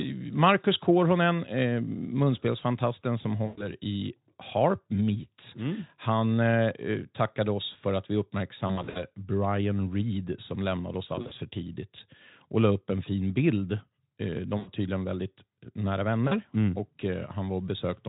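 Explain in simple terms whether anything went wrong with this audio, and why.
Yes, the speech briefly smears into a buzzy tone or a fading noise at 3.45 to 3.66 s (just after "eh munspelsfantasten som"), 8.68 to 9.05 s, 11.15 to 11.34 s, 14.57 to 14.69 s, and 16.27 to 16.36 s (just before "mm och"). This is VoIP packet loss concealed by the speech codec. Chunks of sound went missing in transit, up to 120 ms at a time, and the Speex decoder filled each gap by stretching the last sound it had while letting it die away.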